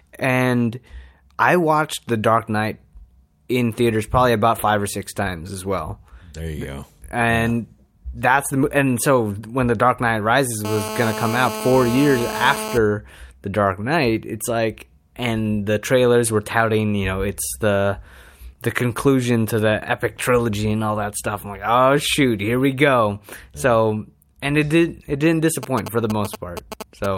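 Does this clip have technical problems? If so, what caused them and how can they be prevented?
Yes. From 10.65 to 12.78 s, GSM phone buzz appears. A nearby 2G phone in a call pulses 217 times a second. The audio circuit rectifies the pulses into a harsh, harmonic-rich buzz about 8 dB below the speech. Keeping phones away from microphones, cables and preamps, or switching them to flight mode, prevents it.

From 25.63 to 27.06 s, just after "it did it didn't", GSM signalling bursts appear. These are galloping ticks and short 217 Hz buzzes, roughly 10 dB under the speech, from a phone exchanging brief signalling bursts. Well-shielded, balanced cabling and distance from any phone prevent this too.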